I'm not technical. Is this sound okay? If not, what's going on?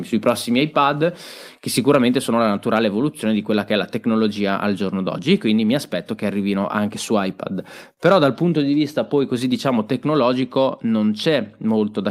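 No. Around 7.93 to 7.99 seconds there is a short stall from a late packet. One small piece of the speech arrived late, and the receiving side ran out of audio to play. Instead of going silent, it stretched the last bit of sound by about 37 milliseconds until the late piece turned up, then carried on from the same spot. Nothing is lost, but that moment sounds briefly held or smeared, with a faint buzz or dip.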